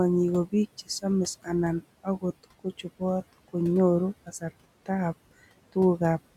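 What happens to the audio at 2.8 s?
Speech cut by the noise suppressor, between 2.43 and 3.01 s: the suppressor mistakes parts of the speech for noise and drops them by up to about 17 dB, so roughly a tenth of a second of softer sound comes out swallowed. Unlike the suppressor's steady artifacts, which affect the background, this dip turns down the speech itself. Those noise suppressor artifacts are also present here, as across the whole clip: the background is held down by about 18 dB.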